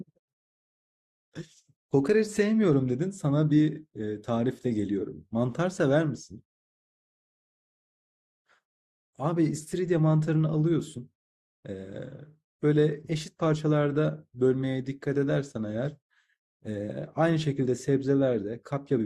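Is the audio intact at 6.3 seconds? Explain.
Yes, the speech at 6.3 seconds plays through cleanly, with no dropout, click, distortion or other audible fault at that moment.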